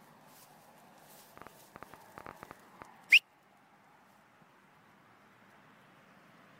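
From 1.38 s to 2.83 s a train of clicks sits on top of the sound: roughly fifteen short pulses of much the same shape, arriving at about 9 per second but at an uneven spacing. They peak well above the surrounding audio, so each one reads as a sharp tick or pop. The likely cause is an external pulse source, such as interference from nearby equipment or a faulty connection or power supply.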